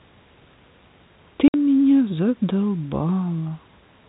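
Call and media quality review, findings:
Packet loss filled with silence at 1.48 to 1.54 s: a 60 ms hole in the speech, abrupt on both sides. This fits three lost 20 ms packets played out as silence. Unlike concealment, nothing is repeated or faded in, and the silence inside the hole sets it apart from a network-driven level dip. G.711 mu-law telephone path carrying the speech, band-limited below 4 kHz.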